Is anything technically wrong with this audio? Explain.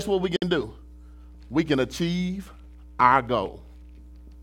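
Yes. At 0.36 s the speech breaks for about 58 ms, ending at 0.42 s. This is a gap at a join of encoded pieces: the audio was encoded in separate chunks and joined untrimmed, so encoder start-up delay and last-frame padding became silence. The edges are smeared by the codec. Unlike a dropout that loses material, the speech resumes exactly where it stopped, with nothing missing, only delayed.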